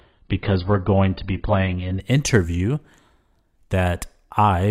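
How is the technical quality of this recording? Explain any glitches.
The opening two seconds are degraded: an adaptive stream starting at a low bitrate. From 0.0 to 2.0 s the speech has nothing above 5.1 kHz, with stronger codec artefacts that point to roughly 16 kbit/s AAC. The player began on a cheap version and then switched to a much better one. Unlike a rebuffer, the improvement arrives abruptly with no gap or stall.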